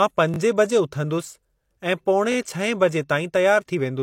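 Speech clip with a repeated buffer fault between 0.34 and 0.38 s. A short segment of the audio is played three times in a row, its original pass plus two extra plays. Each repeat begins with a hard join. The repeat length fits a 20 ms buffer. Fresh audio failed to reach the playback device in time, so it replayed the last block it held. Nothing appears to be lost from the sound, only delayed while the block repeats.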